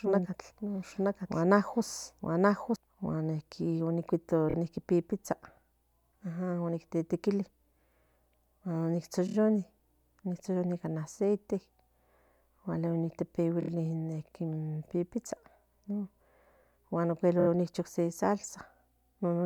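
A doubled audio track runs from the start of the clip until 2.76 s. A second full-band copy of the speech, about as loud as the original, trails roughly a second behind with no reverb colour. It likely comes from the same signal being captured again through a slower path. It then stops abruptly.

Repeated frames cause brief stutters at 4.48–4.54, 9.26–9.34, 13.60–13.68 and 17.39–17.47 s. Each stutter is a single 26.1 ms block played again, which fits one compressed frame being resent. It repeats twice at the first spot, adding 52 ms, and three times at each of the others, adding 78 ms each time.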